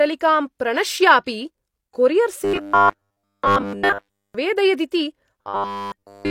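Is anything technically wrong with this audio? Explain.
Yes. From 2.45 to 4.35 s and again from 5.42 s to the end, the speech becomes a rigid, metallic 100 Hz buzz: robotic sound from repeated short buffers, likely caused by roughly 10 ms segments being looped while essentially all new audio is skipped. At 4.91 s, pre-echo puts about 12 ms of hiss before an attack and softens it, because codec quantisation noise is spread across the whole transform block.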